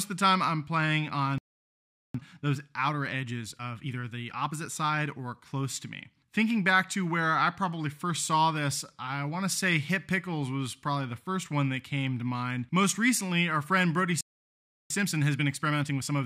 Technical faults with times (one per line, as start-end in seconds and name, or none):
1.38-2.14 playback stall
2.14-5.14 time-compressed catch-up
14.21-14.90 playback stall
14.90-16.25 time-compressed catch-up